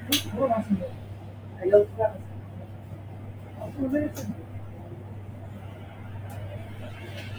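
From start to finish the sound pumps and thins: sharp onsets come through, but anything sustained, along with the ambience and decay behind it, sinks a moment later, so level swings by roughly 10 dB and tails flutter away instead of ringing out. This is a noise suppressor applied to music or sounds. A suppressor built for speech treats steady tones and room sound as noise and keeps pulling them down between attacks.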